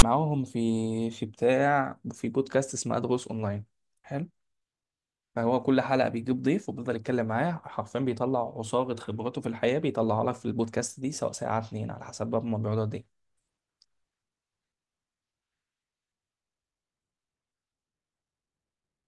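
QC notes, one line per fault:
0.00–0.03 s: file tags played as audio. Metadata text at the start of the file is decoded as sample values, producing a brief, harsh rasp with a DC offset and hard edges. The zero padding following the text plays back as silence before the speech.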